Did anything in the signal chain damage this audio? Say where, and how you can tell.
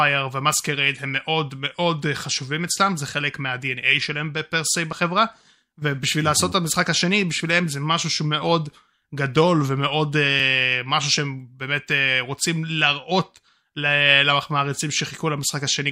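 Yes. At the driver or buffer stage, the speech skips at 4.93 s and 10.40 s, each with a small forward jump and no gap. This is likely a dropped buffer (overrun): samples were overwritten before being read, so about 15 ms and 5 ms vanished and the edges joined directly.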